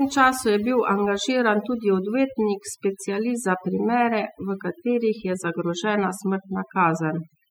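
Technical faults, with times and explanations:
Throughout, overdone noise removal: a noise reduction stage set far too aggressively keeps pulling individual frequency bands down or out whenever they sit close to its noise estimate, so the background drops and breaks up into twinkling specks, and quieter parts of the speech get stripped away.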